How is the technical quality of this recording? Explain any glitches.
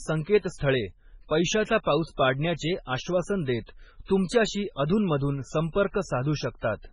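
Poor, with heavy damage throughout the speech. It is likely MP3 compression, fitting a very low bitrate near 16 kbps. Nothing survives above 10.5 kHz. Weak frequency lines drop in and out, so the sound turns watery and swirly, and s sounds chirp.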